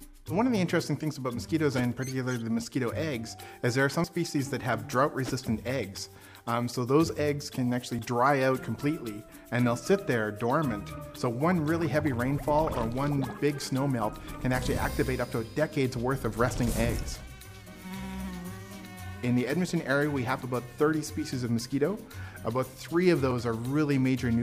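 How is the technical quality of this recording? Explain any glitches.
The recording has three brief discontinuities, at 4.04 s, 7.99 s and 23.31 s, where the sound jumps ahead with no gap of silence. Each is likely a dropped buffer (overrun): the recording software failed to read a block of samples before the hardware reused that memory, so the block was lost and the audio on either side was spliced together. About 50 ms goes missing at 4.04 s and roughly 20 ms at each of the other two points.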